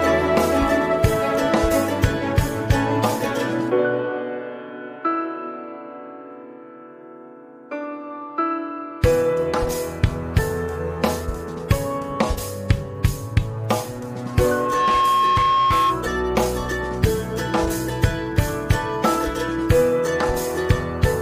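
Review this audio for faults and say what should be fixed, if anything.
Loudspeaker feedback squeal runs from 14.26 to 16.11 s: a steady tone at 1.1 kHz swells over a little under a second until it sits roughly 5 dB above the rest of the sound. A microphone was picking up the loudspeaker it was feeding, and at 1.1 kHz the round-trip gain rose past unity, so that one frequency kept reinforcing itself. To prevent it, increase the distance between microphone and loudspeaker, lower the gain, or notch out the ringing frequency near 1.1 kHz.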